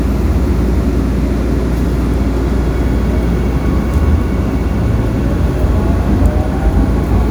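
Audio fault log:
No audible faults detected.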